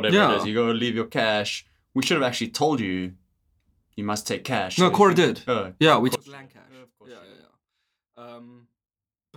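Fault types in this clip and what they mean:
One channel inverted: from 6.15 s, right after "yeah we", until 9.37 s, the speech drops by about 23 dB and turns faint, as if the centred voice has been hollowed out. The likely cause is reversed polarity on one stereo channel. The voice is nearly identical in both channels, so it cancels when they are summed to mono, leaving only the small difference between them.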